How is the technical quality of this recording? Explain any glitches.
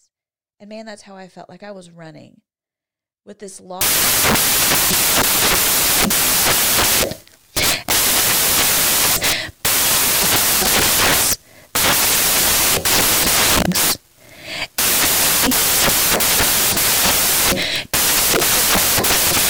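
Poor: after a clean opening, the speech collapses into noise. From 3.81 s, right after "with this", to the end at 19.49 s, samples are built from the wrong bytes: misaligned or swapped bytes turn the fast-changing low bits into each value's large part. The result is loud, harsh broadband noise, close to white on loud sounds. On a spectrogram it shows as flat broadband energy; the waveform becomes a dense block.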